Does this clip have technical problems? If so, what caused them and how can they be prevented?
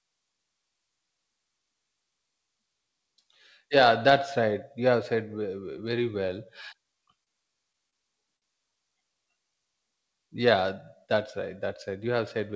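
Yes. Three short stalls from a late packet occur at 7.24–7.29 s, 7.90–7.95 s and 8.37–8.44 s. The jitter buffer ran dry, so the last sound was stretched by about 30, 25 and 52 ms until the packet arrived. Unlike packet loss, nothing is skipped; speech resumes where it paused, only later. A larger or more adaptive jitter buffer would absorb this late arrival.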